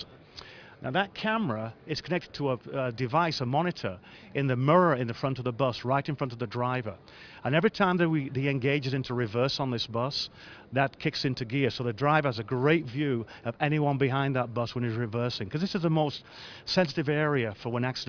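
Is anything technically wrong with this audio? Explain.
No, nothing technically wrong can be heard here.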